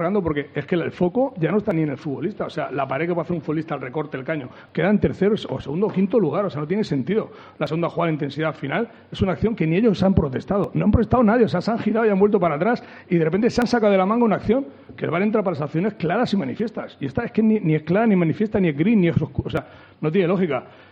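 Audio missing between chunks at 1.71, 4.69, 7.67, 10.64, 13.62, 16.60 and 19.57 s: brief skips of roughly 20 ms recur every 3 s, likely lost as the recorder closes one chunk and opens the next.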